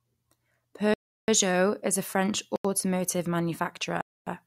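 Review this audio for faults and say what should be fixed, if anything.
The output buffer was not filled in time on three occasions, so blocks of digital silence replaced the speech: 0.94 to 1.28 s (341 ms), 2.56 to 2.65 s (85 ms) and 4.01 to 4.27 s (256 ms). The lengths fit whole buffers of roughly 16384 and 4096 samples. Each dropout cuts out and back with no fade, leaving an audible hole. Prevent this with larger buffers or higher processing priority.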